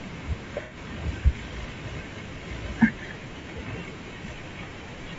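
Low-delay AAC compression runs through the whole speech clip, and it is plainly audible. The voice has a rough, grainy texture, with noise filling the gaps between pitch harmonics and a top band that sounds thin and synthetic. This is likely AAC-ELD, the low-delay codec used in video calls, at a rate that fits about 32 kbps. At this low rate the fine spectral detail between the harmonics breaks down into noise.

AAC frame loss with concealment occurs twice. The first and longer gap runs from 0.62 to 0.76 s. About 90 ms of audio is missing there, which fits three lost frames. The decoder rebuilds the gap from the last good spectrum, so the sound smears into a noisy, phasey patch. The second gap, from 3.41 to 3.45 s, replaces roughly 30 ms, consistent with a single frame. It comes across as a brief blur rather than a dropout.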